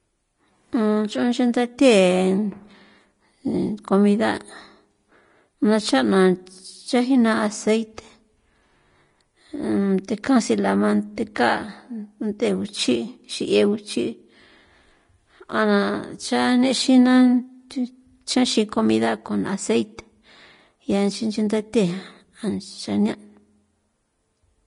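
From start to finish the speech has a hard ceiling near 10.5 kHz. The treble sounds hissy and grainy, and consonant attacks blur. This points to likely Vorbis compression at a low rate, perhaps around 33 kbps, with coarsely quantised treble.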